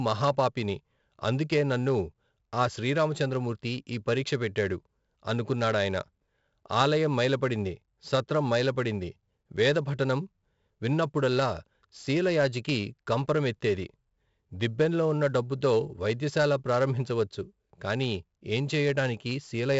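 4-bit ADPCM compression runs throughout: coarse adaptive steps leave gritty hiss riding the speech and smeared attacks, and nothing above 7.7 kHz, which fits roughly 64 kbps.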